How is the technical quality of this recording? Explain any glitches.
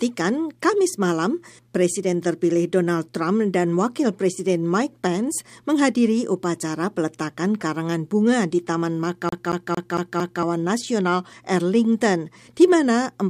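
There's one clear glitch: a CD stuck on one turn, from 9.29 s to about 10.43 s. The same short chunk of speech, roughly 0.23 s long, plays five times in a row, with a tiny mute at each jump back. That's the classic skipping-disc stutter: a scratch keeps kicking the laser back one track at the same spot every revolution, so you get that quick, perfectly even machine-gun repeat before playback moves on.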